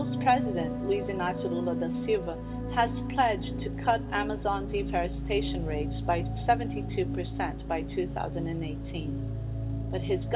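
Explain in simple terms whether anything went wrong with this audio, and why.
Nothing went wrong with this audio; it came over an ordinary phone-quality call line, which keeps only sounds below about 4 kHz, and that is just how such a line normally works.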